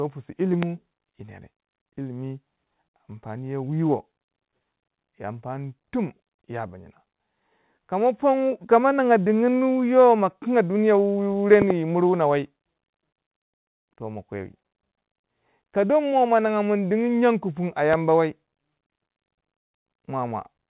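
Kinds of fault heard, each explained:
Loud pop: a sharp thump rises well above the speech at 0.63 s, as a quick double pop at 11.6 s, and at 17.9 s, likely from a voltage spike. Unlike a dropout, the speech continues unbroken underneath.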